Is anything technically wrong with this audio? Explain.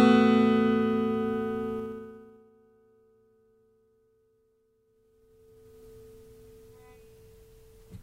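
Yes, there's zipper noise at 1.77–2.51 s (down roughly 25 dB) and 4.83–5.85 s (back up). Unsmoothed 2 dB gain steps each click, giving a quick ticking over the sound.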